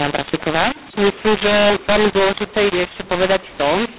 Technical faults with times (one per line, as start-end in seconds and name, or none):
0.00-3.98 mu-law and A-law mixed up